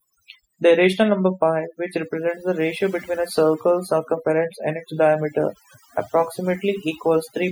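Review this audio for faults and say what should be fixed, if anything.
Overdone noise removal runs through the whole speech recording: bands near the noise floor are cut hard, leaving twinkling specks between phrases. Prevent it by reducing the suppression depth and capturing cleaner source audio.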